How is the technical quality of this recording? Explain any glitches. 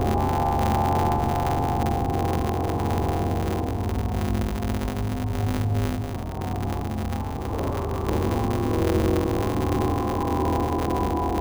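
The technical quality is poor, with a constant defect and two timing glitches.

Throughout, a 150 Hz buzz sits on everything and the sound runs about 1.6 times fast at near-normal pitch. This is a block size mismatch (truncated): one stage writes longer blocks than the next reads, which fits 512-sample blocks cut short, so each block's tail is discarded.

At 6.14 s the audio jumps forward abruptly with no gap, skipping roughly a second and a half. This is a skip ahead, where already-queued later audio was played directly after dropped material.

From 7.32 to 8.26 s the sound hurries to about 137% speed without a pitch change. This is a jitter buffer speed-up, removing short pitch-period slices repeatedly to shed around half a second of excess delay. The call codec path limits the audio to 8 kHz.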